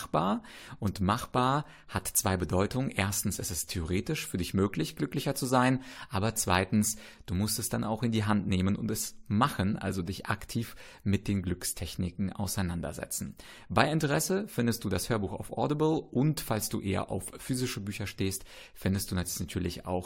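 Nothing is technically wrong with this recording of speech.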